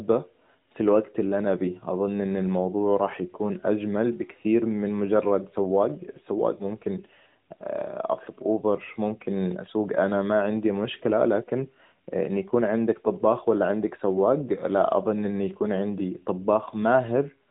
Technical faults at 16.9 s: none

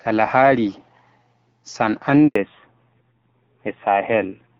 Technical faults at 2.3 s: handover gap; fallback to narrowband

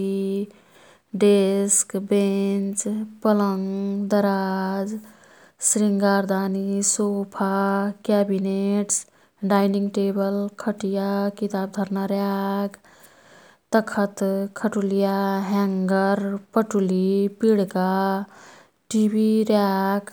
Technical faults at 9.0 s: none

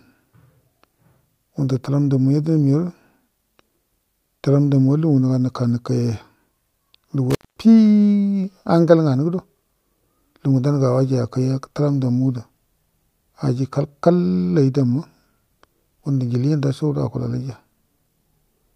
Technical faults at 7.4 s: intermittent contact

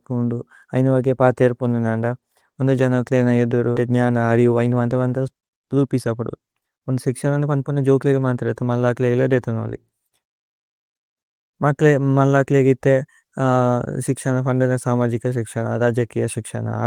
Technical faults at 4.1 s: jitter buffer speed-up

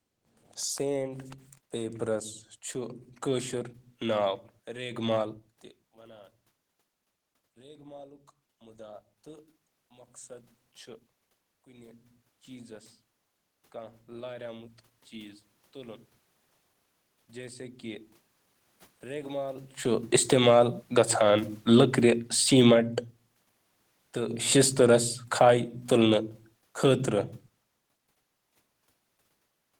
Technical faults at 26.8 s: automatic gain falling

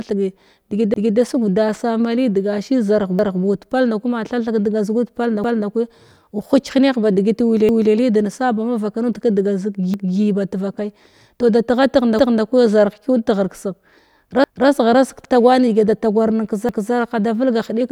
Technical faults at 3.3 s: overlapping chunks

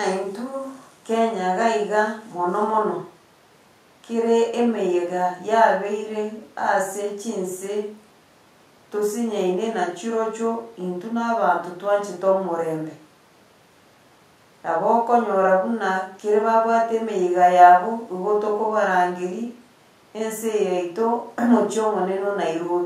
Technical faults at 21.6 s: none

